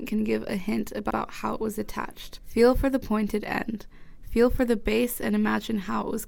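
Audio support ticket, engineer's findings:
Repeated frames at 1.10–1.17 s: a 64 ms block, consistent with two compressed frames, is sent twice to the decoder. Audible stutter; 64 ms is added to the running time.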